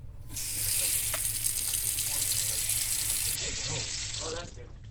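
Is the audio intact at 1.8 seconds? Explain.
Yes, the audio is intact at 1.8 seconds, with no fault present at that moment.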